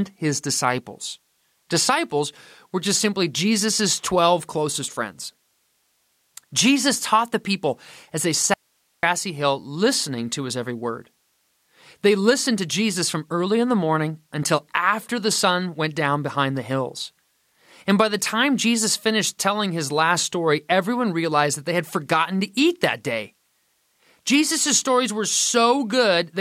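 At 8.54 s the speech cuts out abruptly into an audio dropout to a faint residue. For about 0.49 s only hiss remains, around 45 dB below the speech, until it returns at 9.03 s. The likely cause is a brief signal loss ahead of a still-live downstream path.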